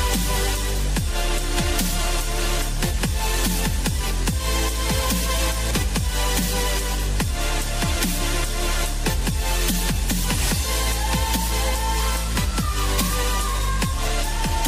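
At 5.71 s there is a CD skip. The laser loses its place and lands on another turn of the disc's spiral. The player mutes for a few milliseconds while it recovers. That brief gap is heard as a small, sharp tick. Playback then carries on from a different point on the disc. The sound does not continue smoothly. It jumps abruptly, as if a short piece of the audio were cut out or repeated.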